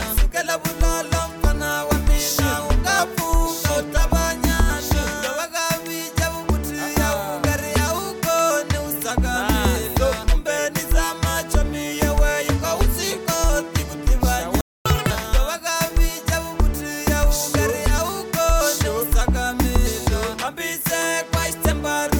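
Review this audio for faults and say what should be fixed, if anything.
Playback stall at 14.61 to 14.85 s: the sound cuts out for about 0.25 s, most likely because the player ran dry or its thread was blocked.

Catch-up at higher speed at 14.85 to 15.10 s: the backlog plays at 2x speed, with pitch raised roughly 10 semitones, before returning to normal.

To prevent both, give the player a deeper buffer and keep its thread from being blocked. Where lost time must be recovered, use a gentler speed-up that preserves pitch.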